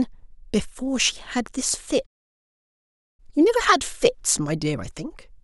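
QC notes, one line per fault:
2.06–3.20 s, playback stall: the player was likely starved of data or had its output thread blocked, so nothing reached the output for about 1.12 s. The speech cuts off mid-flow at 2.06 s and the line falls completely silent, with no fade or tail, until sound returns at 3.20 s. The abrupt stop and the dead gap in mid-flow are what mark it as a stall.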